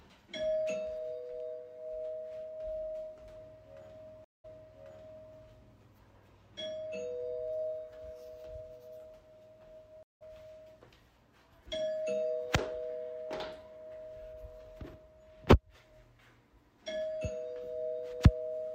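A stream reconnect occurs at 4.24 s, and again at 10.03 s. The connection dropped, leaving about 196 ms and then 178 ms of silence, before a fresh decoder picked up mid-stream. The first time, the sound resumes 896 ms earlier, repeating a short stretch. The second time, it jumps ahead by roughly 150 ms, skipping a moment.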